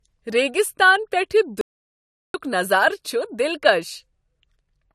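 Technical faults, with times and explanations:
throughout: low-bitrate audio saved at a high bitrate. The speech keeps the artefacts of an earlier encode despite a generous file size. This likely comes from an earlier low-bitrate encode, consistent with 48 kbit/s AAC, re-saved as MP3 that cannot restore the lost detail.
1.61 to 2.34 s: playback stall. The speech drops to silence mid-flow for about 0.73 s, then carries on. The player likely ran out of data or had its thread blocked, so output stayed silent until it recovered.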